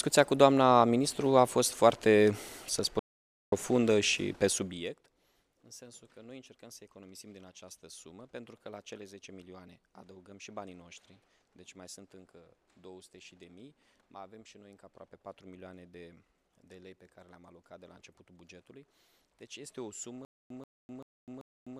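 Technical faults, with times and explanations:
2.99–3.52 s, audio dropout to silence: the sound stops abruptly and about 0.53 s of pure digital silence follows, with no room tone or noise floor underneath, before the sound resumes mid-flow. A gap this clean points to the input signal being cut off while the recording chain kept writing silence, likely from a momentary loss of the input device or link. Whatever occurred during that half second is simply absent.
4.49–5.07 s, zipper noise: during a level drop of roughly 20 dB, a fine ticking rides on top of the sound for a little over half a second. The gain falls in discrete steps of about 1 dB at around 30 steps per second rather than along a continuous curve. Each jump puts a small discontinuity in the waveform, and that rapid run of discontinuities produces the zipping texture while the level moves.
20.25 s to the end, stutter with silent gaps: a 134 ms fragment of sound plays, then about 253 ms of digital silence follows, and the same fragment comes back every 388 ms for four repetitions until the clip ends. 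The even spacing and identical content fit a playback or streaming buffer running dry, with each retry replaying the last chunk it held before stalling again, likely a stream underrun. The audio that belonged in that final stretch never plays.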